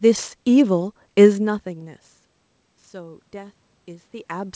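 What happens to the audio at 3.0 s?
At 3.0 s the automatic gain control is rising. From 2.63 s to the end of the clip, the input had fallen by about 22 dB, so the control judged the level too low and began slowly turning its gain up to compensate. Because the gain applies to everything the microphone picks up, the voice and the room's background noise swell together, gradually and without a step, over more than a second and a half.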